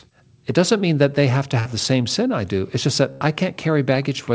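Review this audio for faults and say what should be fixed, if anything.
Burst of packet loss at 1.60 to 1.67 s, just after "that they have to" and before "the same sin I", and again at 3.11 to 3.22 s. Each time the receiver kept extending the last sound while fading it, about 55 ms and then 84 ms of filled-in audio. Playback then resumes further along, having skipped roughly 60 ms and 80 ms of the original. Larger jitter-buffer headroom or forward error correction on the G.722 call path would help prevent these dropouts.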